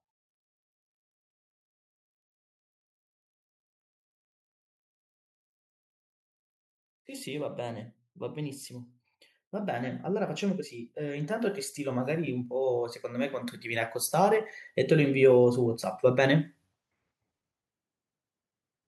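Speech with one fault: automatic gain rising. From 9.5 s to 16.49 s, voice and background swell together by about 12 dB, as the gain control lifts a quiet input.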